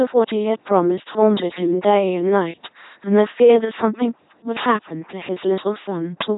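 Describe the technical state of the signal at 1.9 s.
At 1.9 s the speech is running through an LPC-10 vocoder, a fault present across the whole clip rather than a local event. The signal is resynthesised from a low-order vocal tract filter driven by either a pulse train or noise, with each frame forced to be fully voiced or fully unvoiced. The result is a buzzy, mechanical robot voice with heavy coding damage, nothing above 3.9 kHz, and a sound that points to a 2.4 kbit/s rate.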